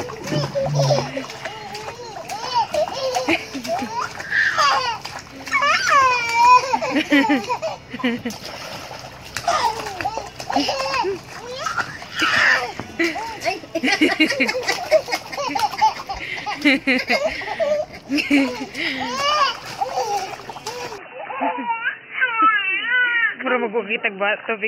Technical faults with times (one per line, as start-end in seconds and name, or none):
20.98-24.67 input switched to a poorer device